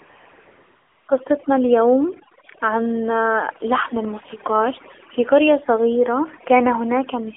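AMR comfort noise fills 0 to 1.08 s: with no speech frames sent, the receiver substitutes a smooth, steady synthetic hiss built from a coarse noise description instead of the real background.

The AMR narrowband mobile codec runs throughout, passing only 300 Hz to 3.4 kHz; the plainly buzzy, synthetic texture fits a low mode around 7.4 kbps.

Overdone noise removal also runs throughout, pushing bands near the noise estimate far down, so the background drops to twinkling near-silence.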